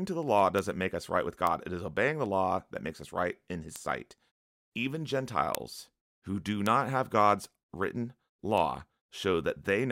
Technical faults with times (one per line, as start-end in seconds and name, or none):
0.59 bit error spike
1.47 bit error spike
3.76 bit error spike
5.55 bit error spike
6.66 bit error spike
8.58 bit error spike